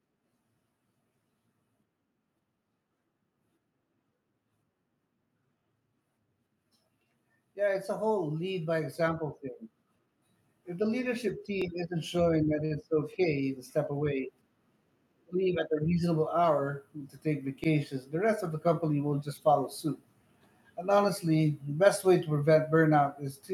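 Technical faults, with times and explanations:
5.59–5.62 s, 11.62–11.64 s and 17.64–17.66 s: overlapping chunks. The audio was handled in 6-second chunks, and each chunk began about 23 ms before the previous one ended. That short piece plays twice at every join. It is heard as a brief stutter every six seconds.
7.86–9.43 s and 10.64–19.36 s: automatic gain rising. The gain control judged the input too quiet and raised its level. The first rise is about 6 dB over roughly one and a half seconds. The second is a slower climb of about 5 dB over nearly nine seconds. Speech and background swell together.
12.65–12.73 s: short stall from a late packet. A packet arrived about 51 ms late and the jitter buffer ran dry. The receiver stretched the last sound to fill the gap, then resumed where it had stopped. Nothing is lost, but one sound is held unnaturally long.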